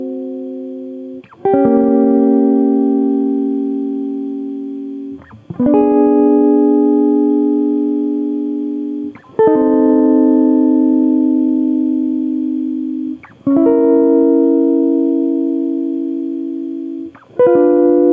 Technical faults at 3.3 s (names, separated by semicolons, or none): gain pumping